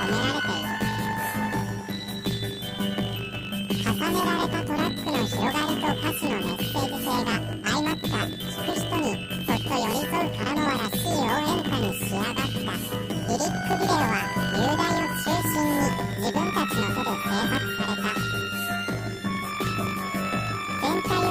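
Right through the clip, the audio has a harsh, robotic buzz at 50 Hz, the telltale sign of planar audio read as interleaved. Each 20 ms block of all-left-then-all-right samples gets read as alternating pairs, so every block plays twice at double speed. With blocks this short, the octave jump mostly blurs into that block-rate buzz.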